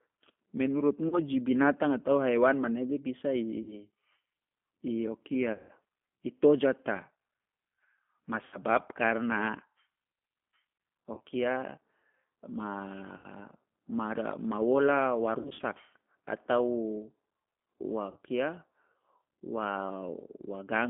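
Throughout, the G.729 codec at 8 kbit/s confines the speech to a 200 to 3400 Hz line band and adds a rough, synthetic edge. It sounds rebuilt rather than merely narrowed. VoIP packet loss concealed by the speech codec strikes at 1.09, 3.62 (right after "atau haiwan manege bisa"), 5.53 (ending before "i tojata"), 8.45, 11.14, 13.17, 15.41 (after "ma wola wa") and 18.11 s. The gaps run from 30 to 160 ms. Instead of silence, the decoder stretches the last sound into a fading buzz or coloured noise. The speech stays weak briefly after each gap, which sets it apart from a clean dropout.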